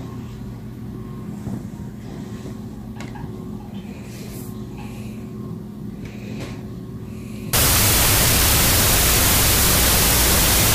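From 7.53 s to the end, the audio breaks into loud, harsh noise with the original sound faintly buried inside it, playing at half speed and an octave low. This is a wrong sample width fault. The pattern fits 32-bit float data being read as 16-bit integers. Each real sample is split into two values, which halves the speed. Half of those values are built from low-order bytes that behave like noise. On a waveform, that section becomes a dense block. On a spectrogram, broadband noise fills the whole frequency range, with faint traces of the original shifted down.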